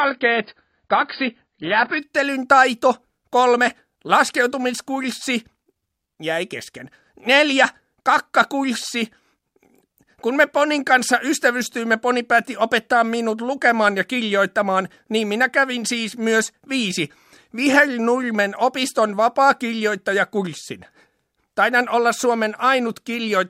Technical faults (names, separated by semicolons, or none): adaptive stream starting at a low bitrate